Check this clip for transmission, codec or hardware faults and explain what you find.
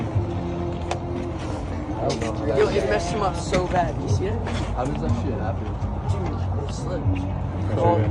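Two faults are audible: a codec fault across the whole clip and a short burst of reception damage near the end.

MP2 compression runs throughout. The sound is dull and lacks top end, with a gurgling, granular texture that stays plainly audible from start to finish. This is likely low-rate MPEG Layer II coding, with a bit budget that fits roughly 80 kbps. The audio is split into 32 sub-bands and each receives a share of the bits. At this rate the upper bands are switched off or flicker in and out. The bands that remain are quantised coarsely, and that produces the grainy distortion.

DAB burbling appears from 7.02 s to 7.19 s, a burst of about 0.16 s. Over that span blips of noise in single sub-bands are laid over the programme. Bit errors got past the error correction into the MP2 data at a low rate, a fraction of a percent. The corrupted samples put short blips of noise into single sub-bands, and corrupted scale factors make sub-bands jump in level for up to a frame. 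The damage is spread over 10 frames.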